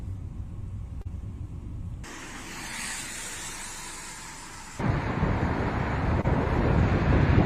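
Short concealed packet loss at 1.01 and 6.21 s: about 40 and 20 ms went missing and were filled by extrapolation, audible as brief smears, with smoothed, repeated-looking spectrogram patches.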